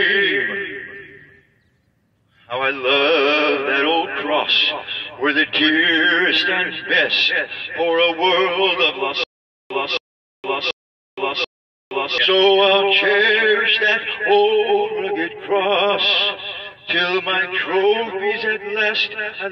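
From 9.24 to 12.18 s a stutter with silent gaps appears: a 0.27 s burst of sound plays four times, each followed by about 0.47 s of dead digital silence, a steady 0.74 s cycle. The likely cause is a stalled player or stream replaying its last fragment on each retry, losing the audio meant for that span.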